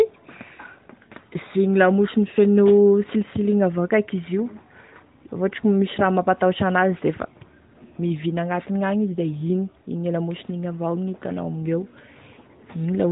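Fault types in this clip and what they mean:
No faults can be heard in this speech clip. It carries the narrowband sound of an AMR mobile codec, with nothing above about 3.8 kHz and only a light coded texture that fits a higher-rate mode near 12.2 kbps.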